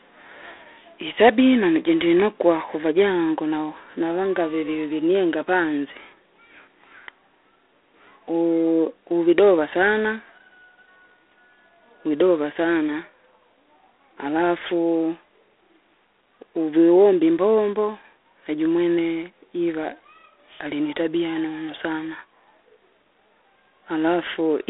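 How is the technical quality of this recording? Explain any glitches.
The quality's pretty rough: it's speech squeezed through a narrowband phone codec, and the damage is plainly audible for the whole clip. That's G.726 ADPCM. It doesn't send the waveform itself, just a few bits per sample describing how far each sample misses an adaptive prediction. Here the grit points to the 24 kbit/s mode, about 3 bits a sample, so there's a harsh, rasping hiss riding on the voice and swelling with it. The band sits around 300 Hz to 3.6 kHz, with nothing above 3.8 kHz, hence the boxy, muffled top.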